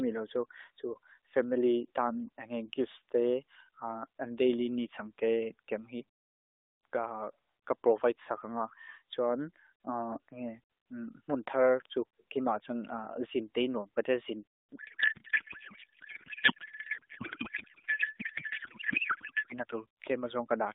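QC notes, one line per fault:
14.76–19.54 s, codec payload misread: the speech collapses into garbled, warbling noise that barely tracks it. The decoder is parsing the AMR frames with every field shifted, which fits octet-aligned packing being read as bandwidth-efficient.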